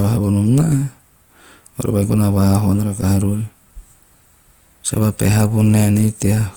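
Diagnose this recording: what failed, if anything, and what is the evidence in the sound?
Throughout, the speech is grainy and rough though it reaches about 20 kHz: likely Opus compression at the codec, noise-filling starved bands, fitting 24 kbps CELT mode.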